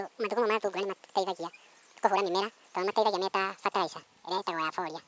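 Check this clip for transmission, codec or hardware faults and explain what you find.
A wrong sample rate fault runs through the whole clip, from start to finish. The samples are being played back at twice the rate they were captured at, with no conversion in between, which fits 8 kHz material sent out at 16 kHz. Because speed and pitch both scale by that ratio, the speech runs at double speed and sits a full octave, 12 semitones, higher, giving a hurried, chipmunk-like sound.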